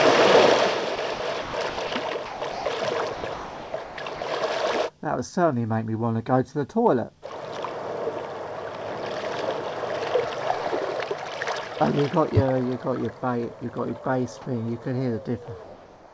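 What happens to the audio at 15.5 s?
At 15.46 to 15.48 s, about 10 ms of sound drops to steady comfort noise, likely sound dropped by the voice detector mistaking it for background.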